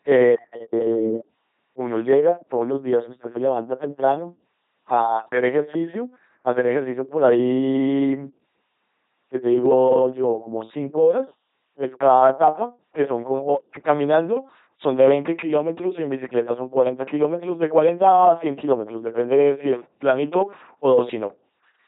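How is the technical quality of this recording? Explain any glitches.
The quality is poor because the whole recording has passed through an LPC-10 vocoder. From start to finish, each moment of speech is rebuilt as either a buzz or noise through a simple vocal tract filter, at a rate that fits 2.4 kbit/s. The result is a heavily damaged, mechanical robot voice, with nothing above 3.9 kHz.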